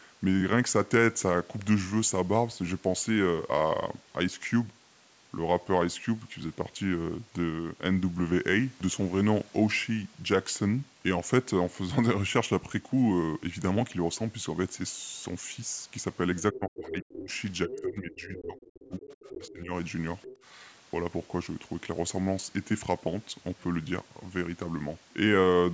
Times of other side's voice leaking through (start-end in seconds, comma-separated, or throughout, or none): 16.41-16.60, 17.71-17.81, 18.57-19.53, 20.22-20.43